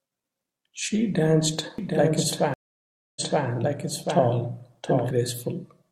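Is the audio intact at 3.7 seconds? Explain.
No. At 3.7 s the speech is heard twice. A doubled audio track runs from 1.78 s to 5.11 s, with a second full-band copy roughly 700 ms behind and about 5 dB quieter. The likely cause is a slower second capture path or an edit that left two out-of-step copies. Unlike echo or reverb, the copy has no decay or room colour, and it starts and stops abruptly.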